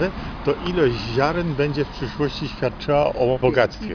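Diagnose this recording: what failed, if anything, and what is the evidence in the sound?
Nothing stood out on listening that would point to a failure at any stage of the chain.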